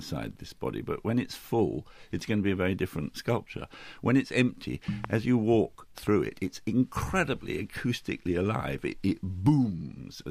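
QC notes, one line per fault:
5.04–5.07 s, loud pop: a single sharp pop jumping about 15 dB above the sound, which carries on underneath. It's likely a voltage spike from a plug, switch or static hitting the line.
5.98–6.09 s, loud pop: two softer pops in quick succession, about 5 dB over the sound. These are likely another electrical glitch, shaped into a brief double thump by the circuitry after it.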